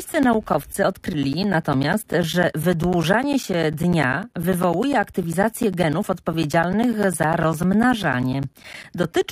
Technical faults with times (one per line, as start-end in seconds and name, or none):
0.13-9.24 periodic USB or driver dropouts